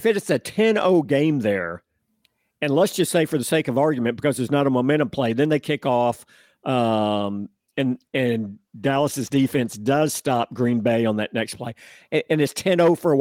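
From 7.36 to 10.99 s there is a call bitrate drop. The bandwidth estimate fell and the encoder's rate was halved from 32 to 16 kbps for about 3.6 s. The coarser coding makes the speech rough and watery until it recovers just before "on that next play".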